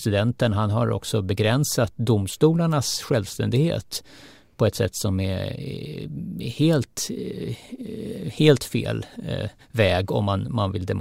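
A speech recording with nothing technically wrong in it.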